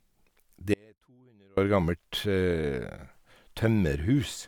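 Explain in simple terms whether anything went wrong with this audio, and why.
From 0.74 to 1.57 s there's an audio dropout to a faint residue. The speech cuts off abruptly, leaving only a faint trace, likely a brief signal loss, unlike a natural pause or gradual fade.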